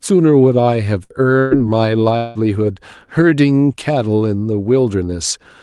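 At 1.03 s and again from 1.39 to 1.54 s the speech briefly freezes into a held, fading buzz or hiss before jumping ahead. These are bursts of packet loss: about 60 ms and then 120 ms of audio never arrived, and the receiver stretched the last sound to cover each gap. From 2.17 to 2.38 s a longer smeared, fading hold of roughly 180 ms replaces the speech, which then resumes further on. This is likely a long network dropout. The call codec's band limit, around 12 kHz, fits Opus on a call link.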